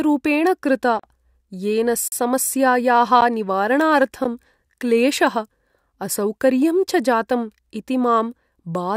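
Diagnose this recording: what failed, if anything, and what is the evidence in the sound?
Speech cuts abruptly to dead silence at 0.99–1.04 s and 2.08–2.12 s, and briefly drops out as a tick at 3.21 s and 4.24 s. These blocks of digital silence are driver buffer underruns, fitting 2048- and 512-sample buffers.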